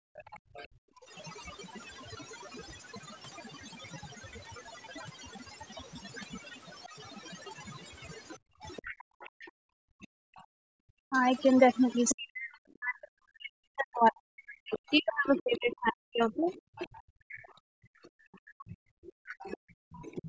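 Right from the start, and through the whole 20 seconds, there's overdone noise removal. The denoiser was pushed too hard, so any frequency band sitting near its noise estimate gets driven down or switched off, and the softer bits of speech go along with it. You hear a background that drops and breaks up into little twinkly specks. The band also stops around 8 kHz, which is just the call's microphone processing.

In the first 0.87 s the talker's speech gets suppressed in double talk. It's likely that both ends were talking at once and the echo canceller couldn't tell the local voice from the loudspeaker echo, so it ducked everything. Here it only bites for something like 150 ms in total, but the deepest dips are big, around 40 dB, so bits of the voice briefly drop away.

Overlapping that, from 0.16 to 2.27 s, the other side's voice is leaking through, faint at roughly 30 dB under the talker. 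This is likely loudspeaker sound that the canceller didn't fully scrub from the mic, so scraps of a second voice sit underneath.

Between 0.39 and 1.11 s the background gets gated by the echo canceller. While the loudspeaker was playing, the canceller clamped the mic hard, and the room sound dips by about 37 dB for around half a second in total, then comes back once the canceller lets go.

The second half is busier. From 7.77 s to the end, the leak returns and it's stronger this time, roughly 20 dB under the speech. From 8.5 to 20.01 s, double-talk suppression keeps chopping the talker, adding up to around 4 seconds of dips that reach about 40 dB, with pieces cut out while the far end speaks. The background gating shows up twice more in that stretch. From 9.03 to 10.79 s it takes out about 1.5 s of room sound, and from 16.96 to 19.68 s about 2 s, each time dropping about 40 dB before the ambience returns.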